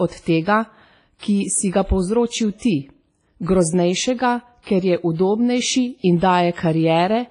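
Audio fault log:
Throughout: WMA compression, likely the cause of the heavy transform-codec damage across this speech. Nothing is present above 10.1 kHz, the hiss swells and fades with the speech, and weak detail has been zeroed, leaving a washy, ringing quality that fits a bitrate around 24 kbps. Unlike a plain low-pass filter, which only dulls the top end, this also leaves a gritty noise that shifts with the speech.
1.19–1.23 s, 4.63–4.67 s, 6.18–6.22 s: pre-echo. Before each of these three sharp attacks, a short hiss rises out of near-silence, lasting about 40 ms at 1.19 s and 36 ms at the other two. The codec spreads the noise meant for the loud onset across its whole block, so it leaks into the quiet moment beforehand and softens the attack. Unlike a click or a reverb tail, the smear comes before the sound, not after it.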